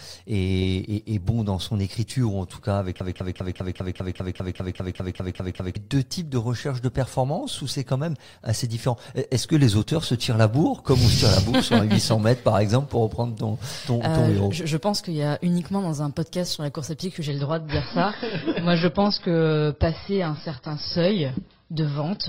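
From 3.01 to 5.76 s the player or stream likely stalled and resent its last fragment. This broken-record loop repeats a 0.2 s piece exactly, 14 times back to back, and the audio that belonged there is lost. At 17.28 s the adaptive stream suddenly drops to a lower bitrate, with no gap, and stays there to the end. Nothing remains above 5.6 kHz, and codec artefacts thicken, which fits a fall to roughly 16 kbit/s.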